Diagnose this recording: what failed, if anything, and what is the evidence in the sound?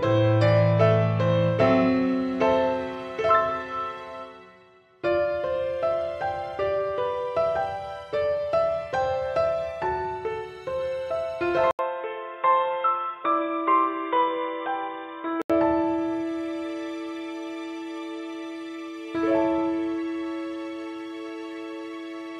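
From 11.71 s to 15.5 s the audio turns dull and boxy. It opens with an 80 ms silence, drops a few decibels in level, and sits on new background noise roughly 40 dB below the signal. On a spectrogram, everything above 3.8 kHz is cut off as if by a ceiling, then full bandwidth returns. The waveform shows a brief flat gap and a smaller envelope. The likely cause is an input switched to a poorer device at the driver level, with a narrowband capture path briefly replacing the original microphone.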